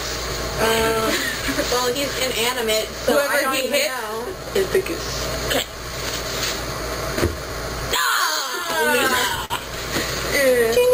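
The audio has a sender whose clock runs slow against the receiver's, by roughly 3 percent, so there's clock drift between sender and receiver for the whole clip. The jitter buffer keeps draining, and the receiver has to keep padding the audio to stay in step. That shows up as repeated timing corrections from 0.29 s to 10.81 s. Playback sits at about 98% speed, and around 150 ms gets added in small, unevenly spaced stretches, all in the same direction. Each edit is small, with no single obvious edit. Between 1.01 s and 2.64 s there are scattered short gaps: a handful of late or lost packets, each a tiny hole of ten milliseconds or less, patched by carrying the last sound forward. Nothing is actually missing, just a few brief ticks or smears. Then at 9.45 to 9.53 s there's a short stall from a late packet. The buffer ran dry, and the receiver held the last sound for 50 ms until the packet turned up, then carried on from the same spot. 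That gives one drawn-out moment with a slight buzz or dip.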